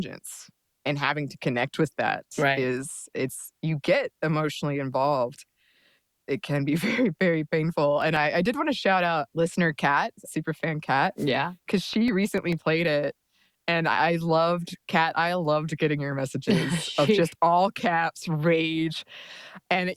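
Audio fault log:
8.02–8.61 s, CD scratch ticks: right after "very very painful" and before "to shout out listener" there's a run of five tiny ticks, the longest only about two milliseconds. That spacing is once per turn of the disc: a scratch wipes out more data than error correction can rebuild, so the player patches or mutes a sliver each time round.
11.17 s, wireless microphone noise hit: just after "kat super fan kat" there's a quick swish of static, under a tenth of a second. That's the radio link of an analogue FM mic briefly fading as reflected signals cancel at the receiver. As the carrier drops, the receiver's own noise jumps up and washes over the audio until the signal recovers.
11.93–12.82 s, CD scratch ticks: a second run of seven ticks, the longest again about two milliseconds, ending just before "it and I loved". Same cause: the scratch comes round on every turn and hits unrecoverable data, and the player's concealment leaves a click each time.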